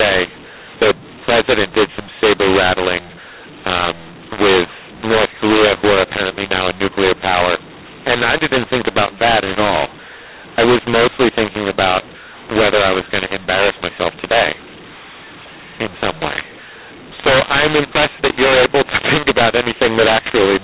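From start to finish the speech is harsh and gritty, with levels that seem scrambled: some sounds jump out too loud while others sink, and the gaps between phrases fill with a steady hiss instead of falling silent. This is mu-law and A-law mixed up. The audio was written as G.711 A-law at 8 kHz but read back with the mu-law curve, so each 8-bit code maps to the wrong amplitude and even the quietest samples are lifted well above silence.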